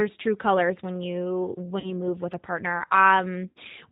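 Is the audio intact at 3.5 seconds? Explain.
No. From 3.50 to 3.58 s the audio suffers VoIP packet loss concealed by the speech codec. About 60 ms of audio never arrived, which fits three 20 ms packets, and the decoder filled the gap by repeating its last pitch and vocal tract filter at falling gain. The result is a brief, stretched buzzy tone or coloured noise that fades instead of a clean continuation. On a spectrogram the harmonics flatten into unchanging horizontal lines that dim across the gap. In the waveform the envelope sags smoothly rather than following the natural syllable shape, and it stays weak for a short while after 3.58 s as the decoder recovers.

That moment also carries the G.729 codec damage present across the whole clip, which is plainly audible and consistent with 8 kbit/s G.729A coding. The speech is rebuilt from a filter, a pitch predictor and a handful of pulses per frame, so it sounds rough and slightly synthetic. 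A spectrogram shows a hard ceiling with nothing above 4 kHz.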